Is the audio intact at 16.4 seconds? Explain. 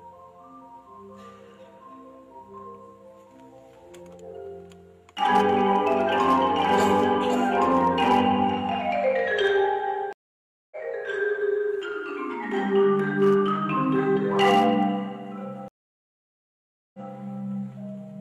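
No. A stream reconnect covers 15.68 to 17.12 s, so 16.4 s falls inside a gap of about 1.26 s of silence. The connection dropped, playback stalled, and the player then reconnected and started a fresh decoder partway through the stream. When sound returns it picks up about 0.19 s earlier than where it broke off, so a short stretch is heard twice, with the first frame or two muted or faded in.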